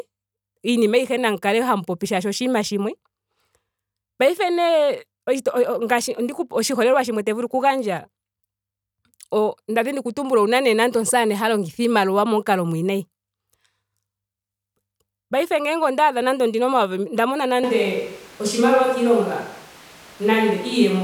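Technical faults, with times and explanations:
17.64 s to the end, switch to a distant microphone: the speech turns abruptly roomy and hollow, with the low end thinned out and room noise rising to roughly 25 dB below the speech, while the overall level stays about the same. The change is sudden and never reverses. The likely cause is that the close microphone's feed dropped out and the recording fell back on a microphone farther away, which picks up more reflections and background than direct sound.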